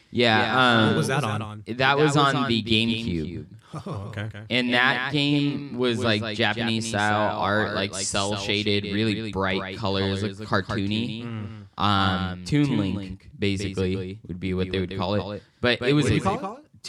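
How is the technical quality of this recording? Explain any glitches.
The speech carries a doubled audio track for the whole clip: a clean, quieter copy trails roughly a fifth of a second behind, about 10 dB down, giving a flat slapback with no room decay. Likely a second, slower capture path mixed alongside the original.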